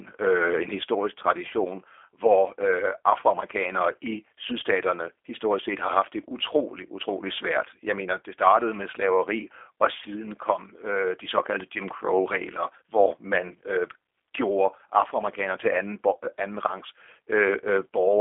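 This is a speech clip carrying G.729 codec damage from start to finish. Nothing is present above about 3.7 kHz, and the sound sits in a narrow telephone band of roughly 300 Hz to 3.5 kHz. The speech is intelligible but plainly rough and synthetic. The codec rebuilds each 10 ms frame from a vocal tract filter, a pitch predictor and a few pulses. That leaves a buzzy, reconstructed quality that fits a low-rate 8 kbit/s G.729A encode.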